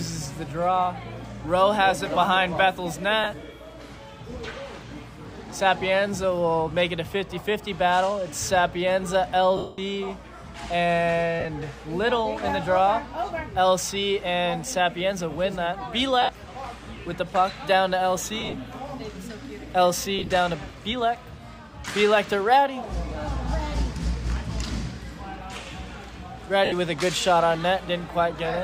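Lost LE Audio frames at 3.24, 9.57, 11.40, 16.22, 18.41, 20.19 and 26.65 s. The decoder reuses the last spectrum with random signs, so the gaps fill with a noisy smear rather than dropping cleanly to silence. The 210 ms gap at 9.57 s fades gradually toward quiet.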